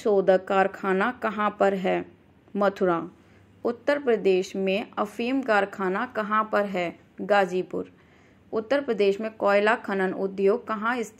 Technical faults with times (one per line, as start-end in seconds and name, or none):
none